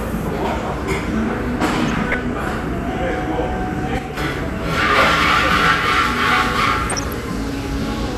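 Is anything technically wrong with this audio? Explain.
Yes. Throughout, the sound is dull and gurgling, likely from MP2 compression at a low rate near 80 kbps. Upper sub-bands flicker off, leaving ragged, gappy high-frequency bands on a spectrogram.

From 1.77 to 2.14 s and again from 6.90 to 7.13 s, DAB burbling appears. Residual bit errors corrupt sub-band data, causing short blips of noise that show as isolated blocky bursts in single bands.

From 3.99 to 4.17 s, a sudden gain jump drops the sound and background by about 6 dB together, likely from an unramped gain change. It appears as an abrupt waveform step.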